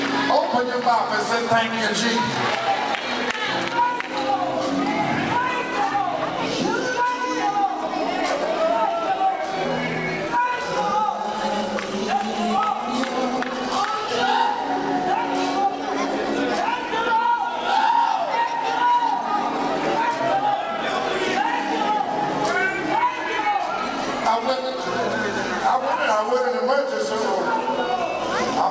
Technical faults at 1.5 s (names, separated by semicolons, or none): clock drift between sender and receiver; repeated timing corrections